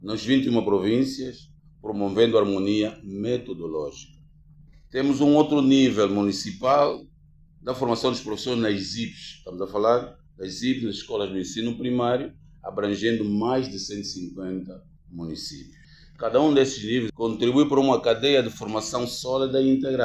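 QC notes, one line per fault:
No audible faults found; nothing to flag.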